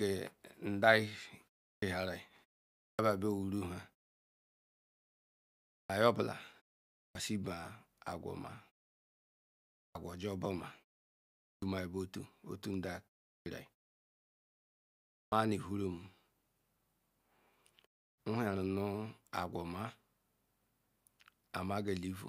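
Clipped start after a pause occurs at 1.74, 2.9, 5.81 (just before "niye ogbala"), 7.07, 9.87, 11.54, 13.38 and 15.24 s. Each time the output device idles through a gap of 0.33 to 1.94 s and needs roughly 80 to 89 ms to wake before it passes sound again. The opening of each phrase is lost, so speech bursts out of silence without its first sounds.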